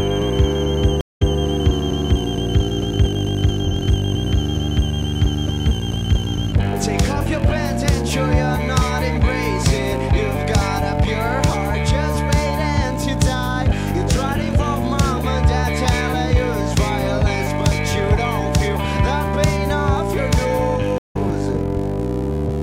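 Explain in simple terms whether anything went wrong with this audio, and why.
Stream reconnects at 1.01 to 1.39 s and 20.98 to 21.17 s: the connection dropped, the sound stopped for about 0.2 s, then playback restarted from scratch. The first time it repeats about 0.18 s; the second, it skips ahead roughly 0.15 s.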